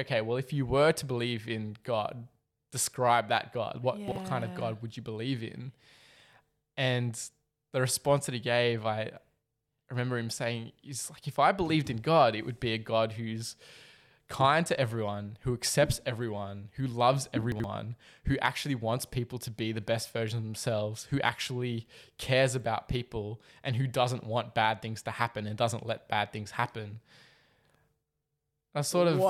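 A speech clip with two brief jumbled moments, caused by chunks out of order. At 4.08 to 4.16 s, one 40 ms chunk plays one chunk late, swapping places with its neighbour. At 17.52 to 17.64 s, a 40 ms chunk arrives two chunks late, after the two that should follow it. Nothing is missing. Each swap creates three hard joins, heard as a garbled, jumbled moment.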